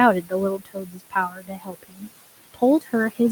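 Noise suppressor artifacts run through the whole speech clip. The suppressor judges, frame by frame, which frequency bands hold steady background noise, and pulls them down by about 16 dB. The room noise, sitting about 16 dB below the speech, drops away in the gaps and swells back up under the talking.

Speech cut by the noise suppressor first appears from 0.22 to 0.33 s, where about a tenth of a second of speech is treated as noise and pulled down by up to about 17 dB. It happens again, at greater length, from 0.58 to 2.08 s, with roughly a second of speech affected and dips of up to about 18 dB. In both stretches, parts of the speech fall with the background, so they sound swallowed and faint.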